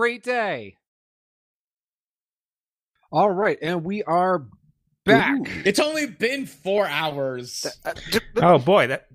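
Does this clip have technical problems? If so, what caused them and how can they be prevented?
Yes. At 5.19 s and 6.78 s the recording software likely failed to read its input buffer before the audio hardware overwrote it, a dropped buffer (overrun). Each time, a few milliseconds of speech vanished and the audio on either side was spliced straight together with no gap. You hear a small forward jump in the sound, but no silence. Giving the capture thread higher priority and a larger input buffer prevents this.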